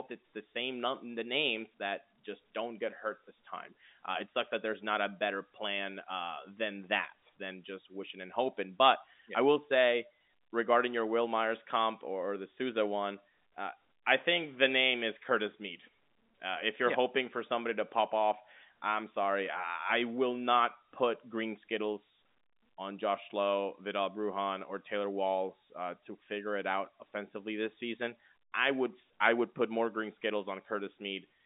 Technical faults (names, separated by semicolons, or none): none